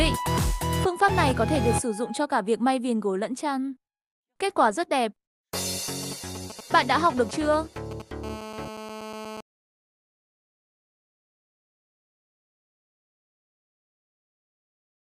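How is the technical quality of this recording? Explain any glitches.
The recording is marred by mobile-phone interference in two stretches.

From 5.88 to 8.02 s, a galloping dit-dit-dit of short raspy buzzes, roughly 15 dB below the sound, marks GSM signalling bursts. A nearby 2G phone is sending brief groups of radio bursts, pulsed at 217 Hz, which the audio circuit rectifies into audible clicks.

From 8.24 to 9.41 s, a hard, steady, harmonic-rich 217 Hz buzz sits about 12 dB below the sound, unrelated to it. This is GSM phone buzz: the phone, now in a call, transmits continuously in 217 Hz bursts that get rectified into the audio path.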